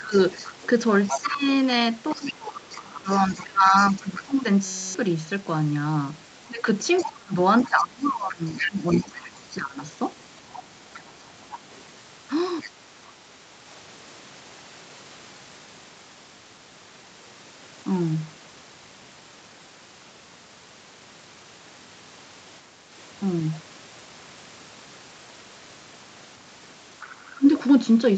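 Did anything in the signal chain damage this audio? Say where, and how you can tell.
Yes. In the call processing, speech is suppressed in double talk at 0.0 to 4.45 s, 6.46 to 9.81 s and 27.19 s to the end, dipping about 20 to 25 dB, likely because the echo canceller ducked both sides.

The other side's voice is leaking through at 0.14 to 4.23 s, 6.97 to 12.7 s and 27.0 s onward, about 10 to 25 dB under the speech. That's likely residual loudspeaker echo the canceller missed.

At the driver or buffer stage, there's a system hang loop from 4.65 to 4.94 s. A 5.33 ms slice repeats as a steady 188 Hz buzz, which fits a 256-sample ring buffer, and about a third of a second of audio is replaced.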